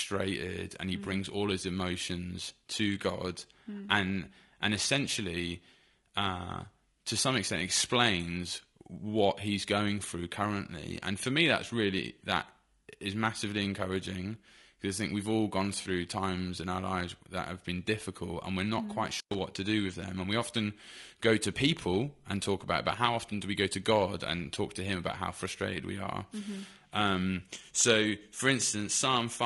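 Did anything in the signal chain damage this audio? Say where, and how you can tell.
Yes. At the codec stage, the whole speech clip carries plainly audible coding damage of the kind low-delay AAC compression leaves, likely AAC-ELD at a rate around 32 kbps. Too few bits per frame leave the voice rough and grainy, with noise filling between harmonics.

On the network or transport side, AAC frame loss with concealment hits from 15.81 to 15.87 s, between "think we've all gone" and "times in our lives". The 40 ms gap fits two lost frames, patched by the decoder from the last good spectrum into a smeared, noisy or phasey patch.

In the analogue wiring, an intermittent contact opens from 19.12 to 19.39 s, after "we're not mm quite" and before "to do with them". For about 109 ms the line is broken, so the sound drops out or breaks up, with crackle where the contact opens and closes.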